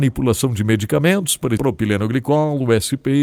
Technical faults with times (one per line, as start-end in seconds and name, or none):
1.57-1.59 skip ahead
1.61-3.15 jitter buffer speed-up